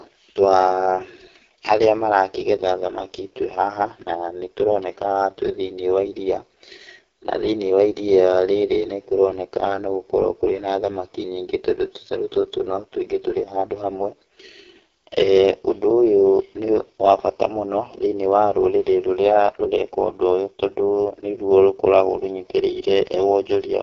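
From start to finish, the speech carries the sound of the AMR wideband (HD Voice) codec at a very low rate, which fits 6.6 kbit/s. Coding damage is heavy. Voices turn rough and raspy. The top band is synthetic noise. Nothing is heard above about 7.3 kHz.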